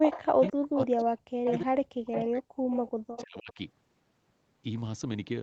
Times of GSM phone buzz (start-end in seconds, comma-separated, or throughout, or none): none